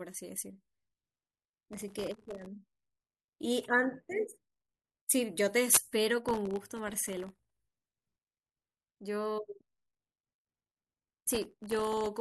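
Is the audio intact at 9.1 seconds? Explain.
Yes, at 9.1 seconds the speech plays through intact, with no audible fault at that moment.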